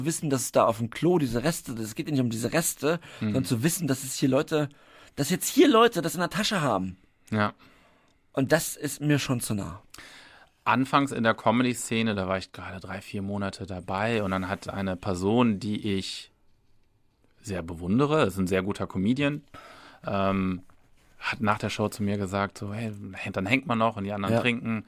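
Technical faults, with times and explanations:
No technical faults are audible.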